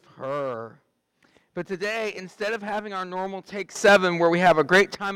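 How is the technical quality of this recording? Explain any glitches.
One glitch affects the recording. A sudden gain jump runs from 3.76 to 4.95 s. The level likely steps up by about 12 dB without a ramp, so the sound and its background noise both leap louder at once.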